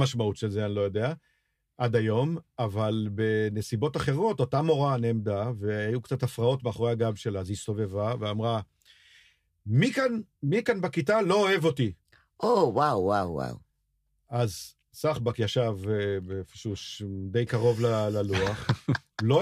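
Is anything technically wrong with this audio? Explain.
No, nothing technically wrong can be heard in this speech recording. It holds steady throughout, with no audible interruption or disturbance anywhere in the clip.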